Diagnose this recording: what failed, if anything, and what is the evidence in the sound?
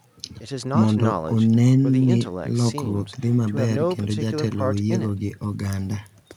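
Nothing failed; no stage in the chain shows trouble.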